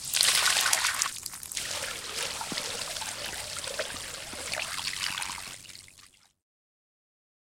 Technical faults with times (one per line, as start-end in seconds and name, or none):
4.71-7.53 overlap-add ripple